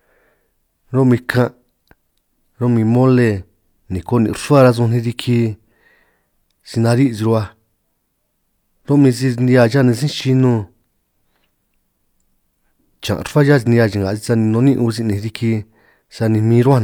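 Hard clipping occurs from 4.53 to 4.69 s, where the speech peaks exceed what the signal path can pass by about 2 dB and are sliced flat. Those squared-off tops generate high harmonics, heard as a brief crackle on the loudest moments rather than sustained fuzz.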